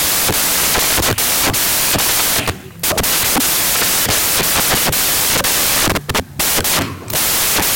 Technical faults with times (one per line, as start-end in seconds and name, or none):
0.00-7.75 samples built from the wrong bytes